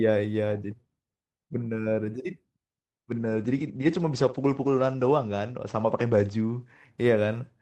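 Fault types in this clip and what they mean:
Call bitrate drop: From 3.13 s the encoder gets fewer bits. Speech turns coarser, and highs above 8 kHz vanish, pointing to roughly 13 kbps.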